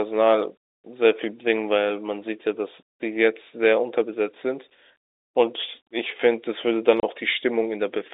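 At 7.00 to 7.03 s, packet loss filled with silence: the receiver lost about 30 ms of audio, which fits three 10 ms packets, and played silence instead, leaving a hard-edged hole in the narrowband telephone speech.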